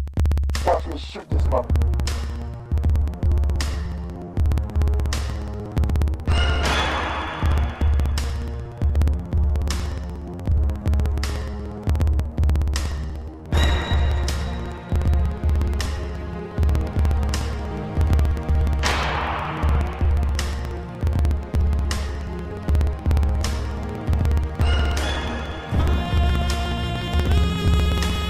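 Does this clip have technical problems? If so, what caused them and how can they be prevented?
Yes. Periodic USB or driver dropouts run from 0.08 s to 28.22 s. Every 0.06 s a slice of about 4 ms is skipped, producing a steady tick that appears only while there is signal. That rigid, clock-like spacing distinguishes it from random buffer underruns. To prevent it, stop the background task that periodically stalls the USB bus or audio driver, or move the interface to its own USB controller.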